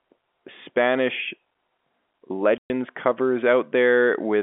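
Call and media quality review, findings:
Packet loss filled with silence, 2.58 to 2.7 s: a 120 ms hole in the speech, consistent with six consecutive 20 ms packets dropped on the receive path. No concealment; the jitter buffer or decoder inserted zeros, so the audio stops dead with hard edges. The G.711 telephone coding band, roughly 250 Hz to 3.4 kHz, is intact on either side of the gap.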